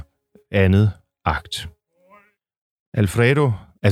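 No technical faults are audible.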